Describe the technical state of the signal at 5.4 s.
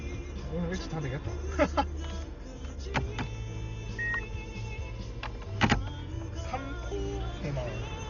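At 5.4 s the audio is band-limited and coarse, as it is for the whole clip. Nothing reaches above about 6.9 kHz, so the top end sounds dull, and tonal parts carry a rough, fluttering noise texture. The likely cause is heavy Dolby Digital compression, with damage that fits a bitrate near 40 kbps. At that rate the encoder narrows the band and leaves many frequency lines without mantissa bits, and the decoder fills those lines with dither noise.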